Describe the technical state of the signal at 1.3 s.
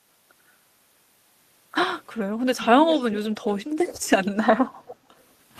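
At 1.3 s the speech signal is intact, with no audible dropout, clipping, distortion or other technical fault at that moment.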